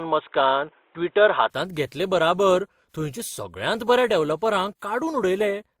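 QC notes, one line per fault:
throughout: transcoding between lossy codecs. Two layers of compression artefacts sit on top of each other, consistent with a WMA encode at about 96 kbit/s likely re-encoded to Opus at about 32 kbit/s. The second codec spends bits re-coding the first one's smearing, and the band stops at 20.3 kHz.
0.0 to 1.5 s: input switched to a poorer device. The opening is dull and narrow, with nothing above 3.8 kHz, a level about 5 dB different and a noise floor roughly 45 dB under the signal. At 1.5 s the sound clears up with no gap, likely a microphone change mid-recording.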